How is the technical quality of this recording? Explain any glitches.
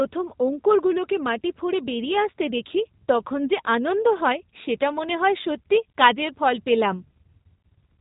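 The quality is limited by plainly audible G.729 codec damage running through the whole speech clip. It sounds like a narrowband VoIP call at about 8 kbit/s. The speech is rebuilt from a vocal-tract filter, pitch predictor and sparse pulses, so it comes out rough and synthetic, and a spectrogram shows nothing above 4 kHz.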